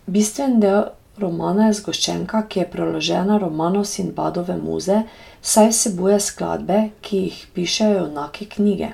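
No technical faults are audible.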